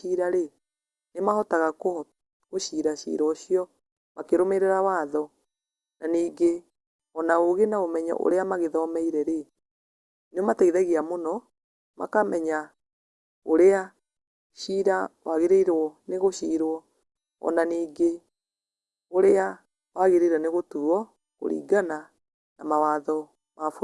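Speech recording; no technical faults can be heard anywhere.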